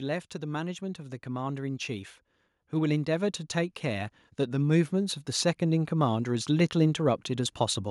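From 0.32 s to 7.59 s the speech shows automatic gain rising: the gain control judged the input too quiet and kept raising its gain, lifting the level by about 14 dB across those seven seconds. It sounds like a slow swell with no step in it. What separates it from a talker leaning toward the microphone is that the background noise climbs in step with the voice, so the background grows exactly as the speech does.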